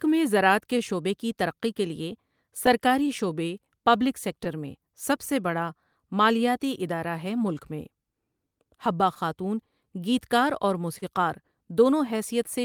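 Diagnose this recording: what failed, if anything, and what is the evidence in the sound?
Clock drift between sender and receiver runs through the whole speech clip. The sender's clock is roughly 3 percent slow. The receiver's jitter buffer keeps draining. That failure sits in the network and buffer stage, and it forces constant compensation.

Repeated timing corrections run from 0.34 to 12.19 s. The receiver repeats short pieces to cover for the slow sender. Playback comes out at 98 percent speed, adding roughly 0.3 seconds.

Scattered short gaps appear from 4.44 to 5.53 s and from 9.14 to 12.49 s. A few packets were lost or late. The receiver hid each hole by extending the last sound. The later holes are longer, up to about 40 ms.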